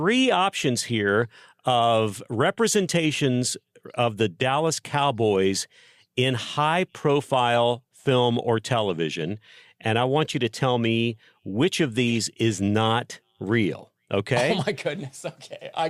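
Corrupt frame decoded at 7.54 to 7.58 s and 12.07 to 12.18 s: damaged compressed frames were played anyway, misplacing energy into brief chirping noise bursts, the second longer and louder.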